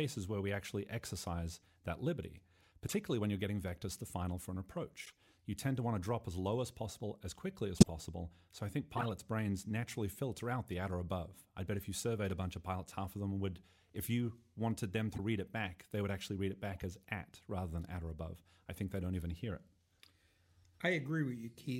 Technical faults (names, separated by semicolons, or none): compressed frames skipped; corrupt frame decoded